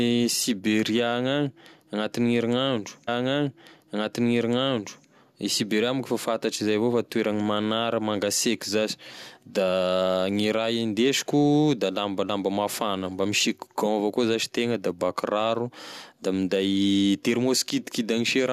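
At 3.07 s the player fetched or queued the same segment twice, a stream segment repeated fault. The stretch of speech running to 5.08 s plays over again, adding 2.01 s to the programme, with a small blip where playback jumps back.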